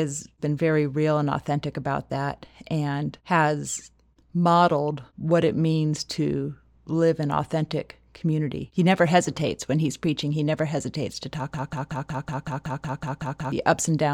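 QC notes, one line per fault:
11.54–13.52 s, broken-record loop: right after "never hesitates to talk", a 0.19 s fragment repeats exactly, back to back, 11 times. The stutter points to a stall, likely in the player or stream, replaying its last held piece, so the intended audio is lost.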